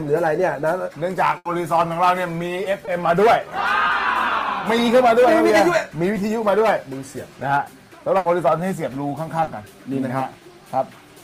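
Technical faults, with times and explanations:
1.37–1.47 s and 8.17–8.27 s, burst of packet loss: Each time, roughly a tenth of a second of the stream arrived too late or not at all. The receiver covered about 80 ms by extending the last sound it had and letting it fade, so a held, dimming stretch replaces the real audio. When the stream picks up again, the audio jumps forward, and about 80 ms of material between the two points is simply gone.
2.85–2.89 s, 3.87–3.91 s and 9.43–9.49 s, short concealed packet loss: These are brief dropouts where small pieces of the stream missed the decoder. The first two are about 20 ms each and the third about 40 ms. The decoder bridged each hole by continuing the preceding sound and then blending back into the real signal. That leaves a quick smear or wobble rather than a clean gap, and a very short sound falling inside one of these spans can disappear.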